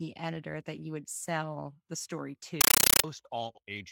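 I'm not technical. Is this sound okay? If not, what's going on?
No. Compressed stream played as audio, from 2.61 to 3.04 s, right after "would sell the story." What sounds like packed Dolby Digital data is played as ordinary sound instead of decoded, so the speech becomes loud, chattering static: short noise bursts, about 31 per second.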